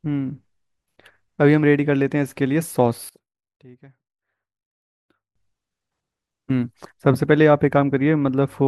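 Speech that falls by about 25 dB between 3.09 and 5.36 s, with the waveform collapsing, likely because one channel is inverted and the centre cancels in mono.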